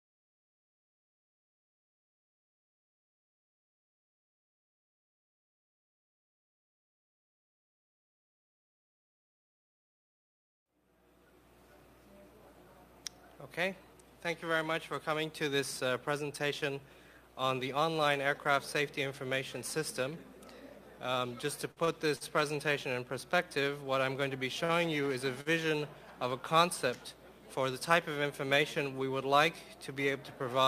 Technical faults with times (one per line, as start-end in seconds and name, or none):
21.71-21.91 short stall from a late packet
22.16-22.24 short stall from a late packet
24.65-24.72 short stall from a late packet
25.41-25.49 short stall from a late packet
27.79-28.25 jitter buffer speed-up